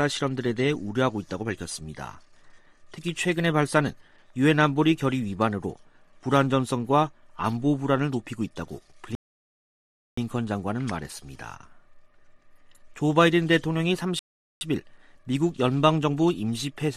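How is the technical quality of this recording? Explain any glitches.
Two rebuffering stalls interrupt the playback. At 9.15 to 10.17 s and 14.19 to 14.61 s, the player exhausted its downloaded audio and paused, adding about 1.02 s and 0.42 s of silence. The sound then resumes exactly where it stopped, with nothing missing. A waveform shows flat gaps, and a spectrogram shows blank vertical bands.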